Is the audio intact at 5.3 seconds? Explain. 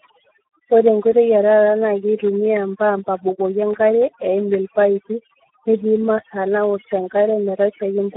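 No. At 5.3 seconds, like everywhere else in the clip, two faults are stacked. The first is overdone noise removal: a reducer set too hard switches off individual frequency bands near its noise estimate, taking the quieter parts of the voice with them. That leaves a near-silent background with twinkling specks.

On top of that is the Speex codec, and heavy damage from it. The speech sits in a narrow phone band of roughly 250 Hz to 3.4 kHz with nothing above about 3.9 kHz. The hoarse, noisy texture comes from too few bits for the excitation, which fits a low setting around 8 kbps.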